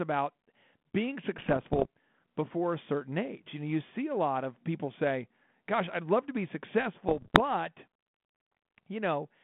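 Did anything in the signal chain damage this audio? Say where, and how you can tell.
Yes. Bit errors on an ADPCM link, at the transmission stage, corrupted the G.726 stream from 1.38 to 1.86 s and 7.08 to 7.41 s, at a rate that sounds like around one percent in the first burst and 0.7 percent in the second. Each flipped bit throws off the decoder's step size and predictor, so pops and rough bursts with brief level jumps ring on past the error.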